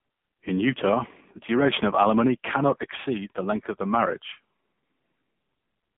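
Speech heard through AMR narrowband mobile codec coding throughout: band limited to 150 Hz to 3.5 kHz, nothing above 3.8 kHz, heavily buzzy and synthetic, fitting a low 6.7 kbps mode.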